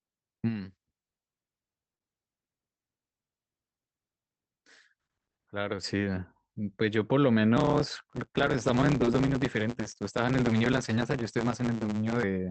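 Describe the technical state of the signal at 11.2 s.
At 11.2 s a block size mismatch (truncated) is present, from 7.56 to 12.23 s. Each written block, which fits 512 samples, loses its end. This gives a 109 Hz buzz, with the speech running 1.16 times fast.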